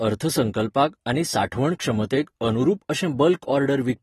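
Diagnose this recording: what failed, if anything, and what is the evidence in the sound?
The failure sits at the codec stage. Throughout the speech the top end stops dead at 12.4 kHz, and the plainly audible smearing and watery warble on sibilants point to AAC compression, likely AAC-LC at a low bitrate, which would fit something near 32 kbps. Short of bits, the encoder drops the highest bands and coarsely quantises the rest. A spectrogram would show a flat ceiling at 12.4 kHz with patchy, holed energy below it.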